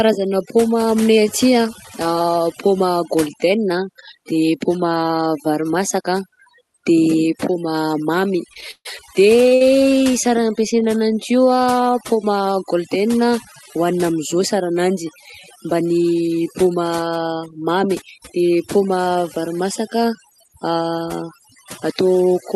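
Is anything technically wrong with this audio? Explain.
Yes, three faults stand out.

Overdone noise removal runs through the whole speech clip. The noise reduction was set too strong, so frequency bands near its noise estimate get pushed down or cut out, and the quieter parts of the voice go with them. The background sinks to near silence with twinkling specks. On a spectrogram the gaps between phrases are almost empty except for scattered isolated dots, and the harmonics look patchy.

Repeated stalls (stutter) happen from 8.53 to 9.62 s, right after "de paoma mamy". The jitter buffer ran dry five times, and each time the receiver stretched the last sound out until audio arrived again. The longest hold was 140 ms, and about a quarter of that stretch is concealed sound. Nothing is lost, but the speech drags and stutters. A waveform shows repeated, near-identical cycles where the gaps were filled, with the longest one fading in level.

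Jitter buffer speed-up comes at 20.64–20.98 s. The buffer was holding more audio than it aims for, so the receiver cut out short pitch-period pieces, roughly 50 ms in all, and played that span at about 112% speed. The pitch stays the same, but the speech sounds hurried. On a spectrogram the syllables look compressed in time while the harmonic spacing doesn't change.

The audio went over an Opus call path at 40 kbps, which is working normally, and its 12 kHz bandwidth shows as a clean ceiling on the spectrogram.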